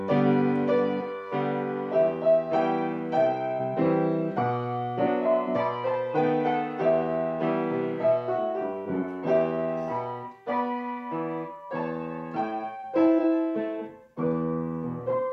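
The signal holds steady throughout, with no technical faults to be heard at any point.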